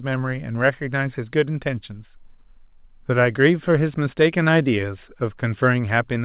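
No technical faults can be heard in the speech. The call path it travelled through leaves nothing above 4 kHz, a narrowband sound that fits G.711 mu-law coding at 64 kbps.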